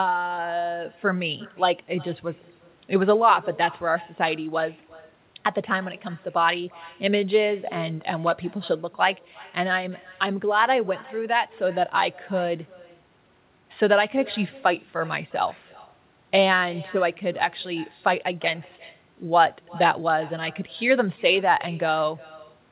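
It's a speech recording off a call, and two problems stand out. First, there's echo with no canceller running the whole way through: every phrase is trailed by a faint, thin copy of itself roughly 0.4 s later, sitting about 23 dB under the direct speech. That's the far end playing the call out of a loudspeaker, its microphone catching it, and nothing stripping it out before it's sent back, so you hear your own voice return after the network round trip. Second, there's a loudspeaker feedback squeal from 7.28 s to 8.48 s. A single tone at 4.4 kHz swells up over about a second and ends up a few dB louder than the speech before it stops. That's a microphone hearing the speaker it feeds, with the loop gain at that one frequency above unity, so the tone keeps growing on its own until something breaks the loop.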